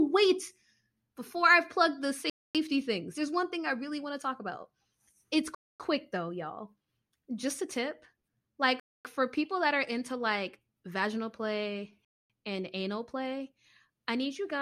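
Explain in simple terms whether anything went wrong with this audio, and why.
Four short silences break up the speech, each about a quarter of a second long, at 2.30–2.55, 5.55–5.80, 8.80–9.05 and 12.05–12.30 s. That's a gap between chunks: the audio was handled in 3-second pieces, and a bit of silence got wedged in at each join. Nothing is actually missing. The speech just stops dead and picks up again, on a steady rhythm.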